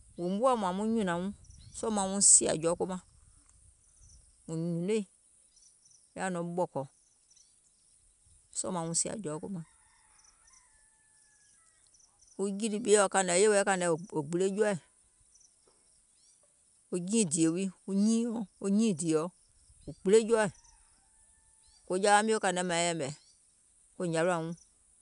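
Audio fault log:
The speech signal carries no technical faults.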